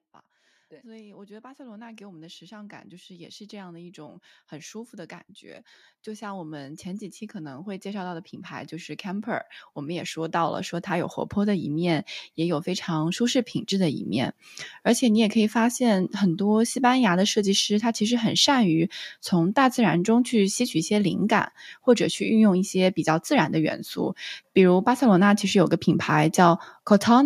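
Automatic gain rising runs from 0.8 to 14.4 s. The gain control judged the speech input too quiet and kept raising its gain, by about 26 dB in total, so the voice and the background noise swell louder together across those thirteen-odd seconds.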